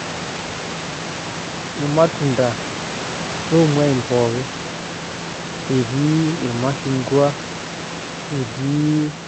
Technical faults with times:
none

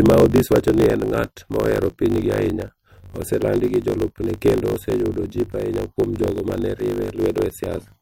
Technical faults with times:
0.00-8.02 block size mismatch (truncated)

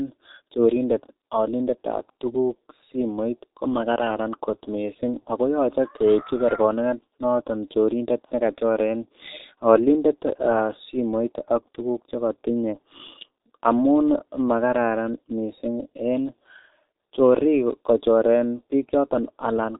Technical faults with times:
0.00-19.79 G.723.1 codec

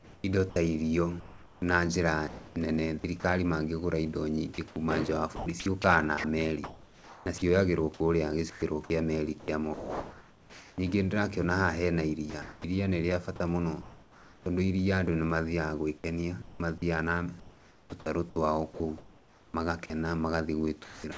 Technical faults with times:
0.00-10.78 sound chopped by the voice detector
12.30-14.46 sound chopped by the voice detector
15.98-21.17 sound chopped by the voice detector

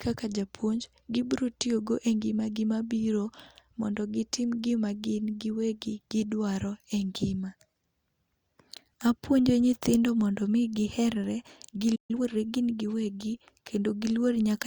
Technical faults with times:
11.95-12.11 playback stall
12.11-12.37 time-compressed catch-up

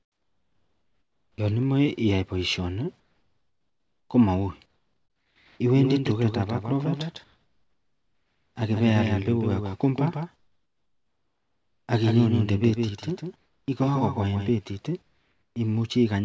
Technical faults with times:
0.00-1.38 comfort noise in place of the background
3.00-4.10 comfort noise in place of the background
4.66-5.60 comfort noise in place of the background
5.76-14.50 doubled audio track
7.24-8.56 comfort noise in place of the background
10.36-11.88 comfort noise in place of the background
13.36-13.68 comfort noise in place of the background
15.02-15.56 comfort noise in place of the background

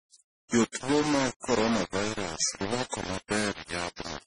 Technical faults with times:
0.00-4.27 low bit depth without dither
0.00-4.27 transcoding between lossy codecs

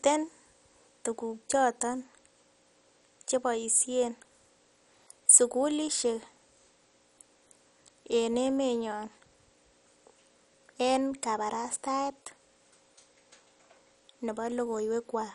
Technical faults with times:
0.00-15.34 MP2 compression

